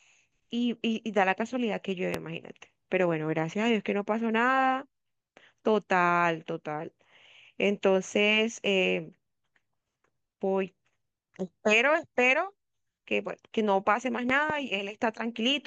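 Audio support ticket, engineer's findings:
Loud pop at 2.14–2.17 s: single sharp pulse, well above speech level. Second loud pop at 14.30–14.52 s: double thump. Likely a connector, switch or static discharge injecting a voltage step. Speech runs on underneath, unlike a dropout; isolated, unlike crackle.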